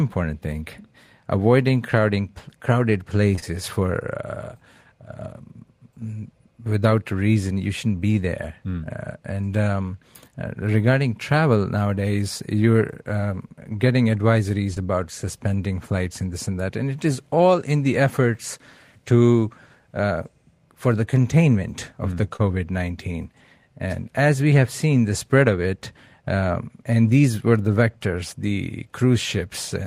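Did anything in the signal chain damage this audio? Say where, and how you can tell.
Yes. The damage is in the network stage: short concealed packet loss in this speech. Just after "avoiding crowding crowded", about 3.35 to 3.44 s, two back-to-back gaps sound like one brief smear. Another comes at 14.74 s, just before "about suspending flights and". A third falls at 22.36 s, after "containment of mm the". Each lost about 20 ms. The receiver extended the preceding sound to cover the hole, then blended back into real audio.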